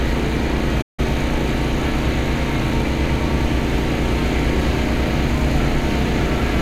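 At 0.81 s the sound cuts out completely and returns at 0.99 s, a playback stall with about 160 ms of silence in mid-flow. The likely cause is the player running short of data, or its thread being held up, so nothing reached the output until it caught up. What sets it apart from a short dropout or click is the length of the gap: a clear, sustained hole rather than a momentary tick.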